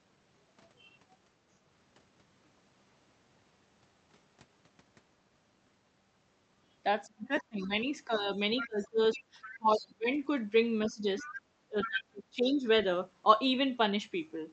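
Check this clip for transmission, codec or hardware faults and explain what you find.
Two echo-control faults show up in the speech, both clustered in the second half.

Speech suppressed in double talk, 7.06–10.07 s and 10.87–12.65 s: the talker's speech dips by up to about 25 dB in broken patches, likely because the echo canceller ducked both sides while they overlapped. Unlike dropouts, the gaps line up with the other side talking.

Other side's voice leaking through, 8.16–8.67 s, 9.44–9.87 s and 11.19–11.88 s: a second voice sits about 10 dB, 20 dB and 10 dB below the speech, likely echo that the canceller failed to remove. Unlike crosstalk, it comes only in scraps, alongside the suppression.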